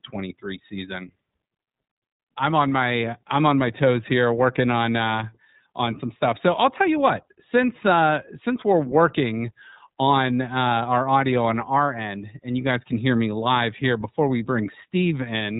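From start to finish the speech runs through the iLBC codec, with nothing above roughly 3.8 kHz, so it sounds boxed-in and phone-like. Each short frame, likely the 20 ms mode, is coded independently, leaving a plainly audible rough, slightly synthetic edge.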